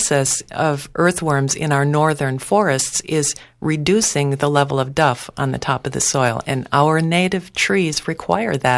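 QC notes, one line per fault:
No faults were found in this speech recording. There is nothing to log against any time.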